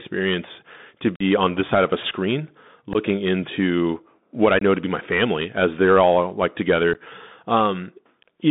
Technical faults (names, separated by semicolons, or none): Bluetooth CVSD headset codec; unconcealed Bluetooth headset packet loss